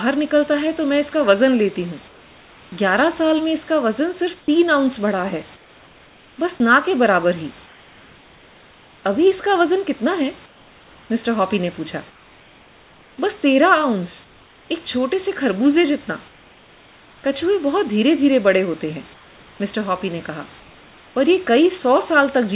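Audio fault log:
2.08–2.72 s, 4.4–9.04 s, 10.46–14.7 s, 16.28–17.24 s, 19.14–21.16 s: comfort noise in place of the background. Real room hiss turns smooth and featureless, about 3 to 4 dB quieter at 2.08 and 16.28 s. Likely discontinuous transmission during pauses.
6.58 s: sound dropped by the voice detector. About 10 ms of speech gives way to steady synthetic noise. The detector likely mistook it for background and stopped sending.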